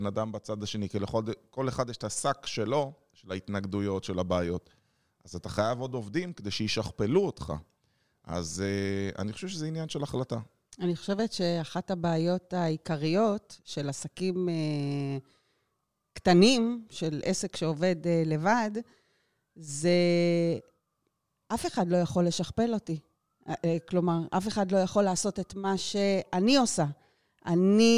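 Nothing in the recording stood out as a technical problem on listening.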